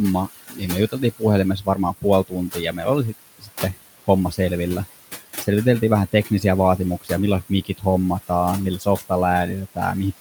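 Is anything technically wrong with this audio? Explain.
Yes. Throughout this speech clip, noise suppressor artifacts are audible. The suppressor treats every band it judges to be steady noise as something to pull down frame by frame, here by about 15 dB. The room noise, which sits about 16 dB under the speech, sinks in the gaps and swells back under each word. On a spectrogram the noise floor appears as a patchy, pulsing haze instead of an even band.

Speech cut by the noise suppressor occurs at 0.26 to 1.23 s, 1.6 to 3.75 s, 7.01 to 7.1 s, 7.49 to 7.83 s and 8.78 to 9.11 s. Within these spans the suppressor mistook parts of the speech for noise and turned them down with the background, by up to about 18 dB, about 12 dB at the mildest. Roughly half a second is affected in the second span, between about 0.1 and 0.3 s in the others. Soft consonants and word endings sound swallowed or faint. 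The waveform shows sudden dips in the envelope, and the spectrogram shows missing high-frequency consonant energy.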